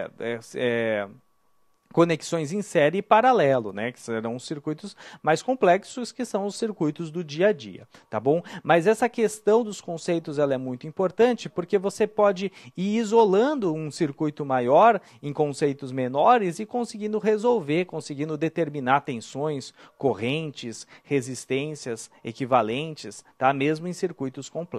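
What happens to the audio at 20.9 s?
Nothing goes wrong at 20.9 s; the audio there plays through intact, with no dropout, click or other disturbance.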